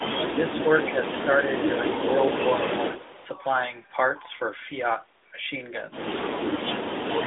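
Speech suppressed in double talk, 0.33 to 0.65 s: while the far side is also talking, the echo canceller likely can't tell the near talker from loudspeaker echo and turns everything down, so the speech dips by about 10 dB for roughly a third of a second.

Echo leak, 2.6 to 3.28 s: a faint copy of the speech returns 211 ms late, about 15 dB below it, likely because the far end's loudspeaker pickup isn't fully cancelled. Within it, from 2.87 to 3.21 s, likely double-talk suppression again dips the speech about 10 dB.

A second echo leak at 6.2 to 6.4 s repeats the 211 ms delayed copy, quieter at about 20 dB down. The clip has the narrowband mobile sound, with nothing above 3.8 kHz.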